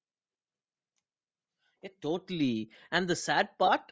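From start to finish, the speech has a breathy, grainy edge. This is likely Bluetooth LC3 compression at a low bitrate, near 32 kbps. The codec zeroes much of the upper spectrum and refills it with noise. Nothing reaches above 8 kHz.

At 1.74 s the automatic gain starts rising. The voice and the background swell together, steadily, until 3.89 s. The rise is about 5 dB. The control judged the input too quiet and kept lifting its gain.

Between 3.67 and 3.69 s, lost LE Audio frames cause a brief noisy smear. The decoder reused the last spectrum with random signs to cover the gap. The gap lasts 15 ms, which fits two missing 7.5 ms frames.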